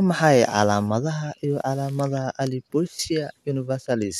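Listening through the speech, nothing stood out as a technical problem at any point.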